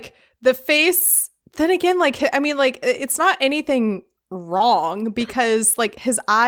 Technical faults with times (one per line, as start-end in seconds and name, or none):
0.77-0.83 lost packet rebuilt from error correction
2.15-2.21 lost packet rebuilt from error correction
4.57-4.61 short concealed packet loss
4.59 lost packet rebuilt from error correction